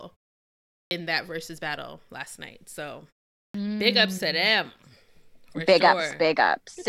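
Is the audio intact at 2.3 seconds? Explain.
Yes, the speech at 2.3 seconds comes through intact, with no dropout, distortion or other fault at that moment.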